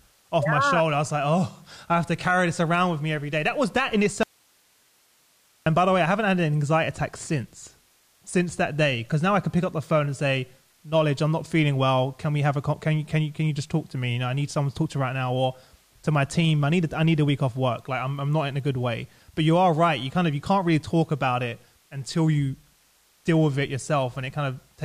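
At 4.23 s, right after "was that in", the speech cuts off abruptly and returns at 5.66 s with "by the way I". This is an audio dropout to a faint residue: for about 1.4 s only hiss remains, roughly 40 dB below the speech. The likely cause is a loss of the source signal while the downstream path stayed live. A natural pause or a fade would taper, but here both edges are sudden, mid-flow cuts.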